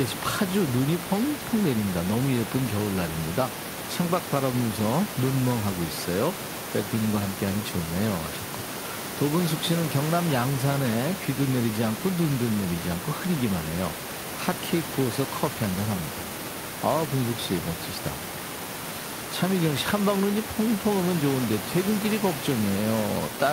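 There are no technical faults to describe in this speech recording.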